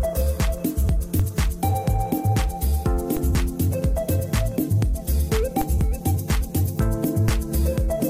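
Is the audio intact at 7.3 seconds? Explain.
No. At 7.28 s a DC step shifts the waveform's zero line by about -14 dBFS, heard as a single low thump. Unlike a dropout or digital click, the sound carries on unbroken while the offset drains away through a 20 Hz high-pass.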